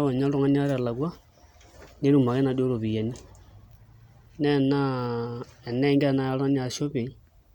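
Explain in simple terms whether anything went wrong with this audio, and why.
Nothing went wrong here, as no technical fault turns up anywhere in this speech recording.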